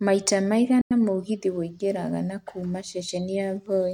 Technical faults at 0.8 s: Bluetooth dropout

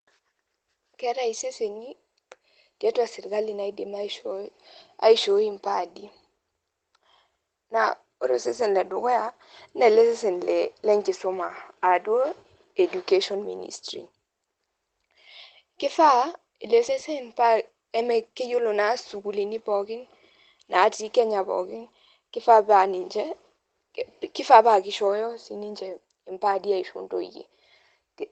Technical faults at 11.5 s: lost packet rebuilt from error correction

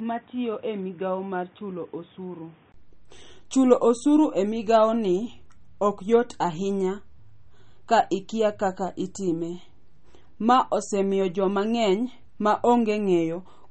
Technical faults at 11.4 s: MP3 compression

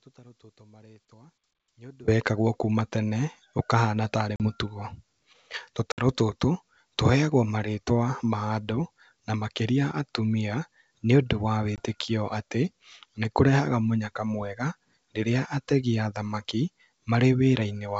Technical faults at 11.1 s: none

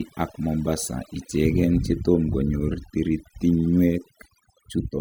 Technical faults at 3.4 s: overdone noise removal

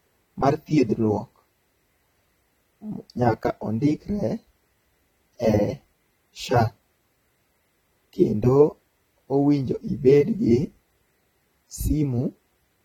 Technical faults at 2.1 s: AAC compression

